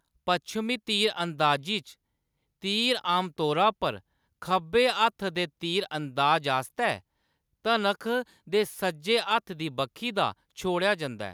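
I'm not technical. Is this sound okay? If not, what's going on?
Yes, nothing here sounds wrong; there's nothing to fix.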